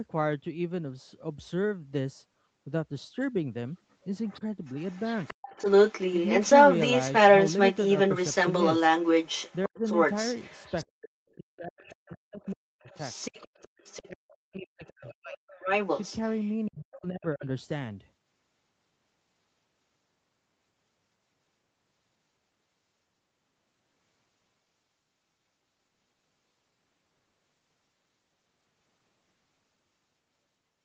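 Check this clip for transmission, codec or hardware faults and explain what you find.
Two related echo-control faults run through the first half of the speech, between 3.78 and 17.45 s. The band-limiting to 8 kHz from the Opus call path is expected for this kind of call.

Other side's voice leaking through: The likely cause is that the echo canceller failed to strip loudspeaker playback from the microphone signal. A second voice is audible from 3.78 to 10.85 s, and there it is clearly louder than the talker. It returns as a very faint scrap at 11.29 s, then from 11.79 to 14.35 s, where it sits well below the talker. From 14.85 to 16.67 s it is roughly level with the talker.

Speech suppressed in double talk: When both sides spoke at once, the canceller likely could not tell the talker from the echo and clamped the whole signal down. The talker's voice drops to near silence in four places. 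The first is a brief dip of about 150 ms at 9.67 s. Longer gaps follow from 10.94 to 12.89 s (around two seconds), 14.08 to 15.4 s (about a second) and 16.68 to 17.45 s, each overlapping or bordering the leaked voice.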